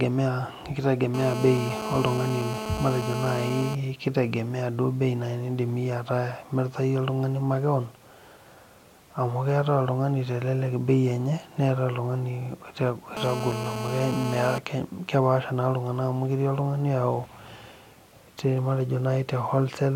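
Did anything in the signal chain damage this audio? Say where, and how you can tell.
Yes. The damage happens in the analogue wiring. A GSM phone buzz appears from 1.14 to 3.75 s and again from 13.17 to 14.58 s. It is a hard, raspy tone at 217 Hz with a dense stack of harmonics, about 7 dB below the speech. It ignores what is being said and holds steady throughout each stretch, as a phone in a call does. A nearby 2G handset transmits in bursts at that rate, and the analogue circuit rectifies them into audible buzz.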